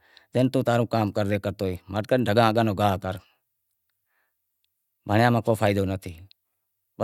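No technical faults can be heard anywhere in the recording.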